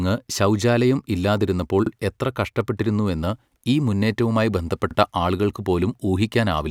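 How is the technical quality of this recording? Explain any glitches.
The speech carries two overlapping-chunk glitches, spaced 3.0 s apart. The first falls at 1.86 to 1.91 s, right after "ശൗചാലയം ഇല്ലാതിരുന്നപ്പോൾ" and before "എത്ര കഷ്ടപ്പെട്ടിരുന്നുവെന്ന് ഈ മുന്നേറ്റവുമായി". The second falls at 4.91 to 4.95 s, after "എത്ര കഷ്ടപ്പെട്ടിരുന്നുവെന്ന് ഈ മുന്നേറ്റവുമായി". The audio was handled in 3.0 s blocks, each starting before the previous one finished, so 44 ms of audio plays twice at every join. Each repeat is heard as a brief stutter or click.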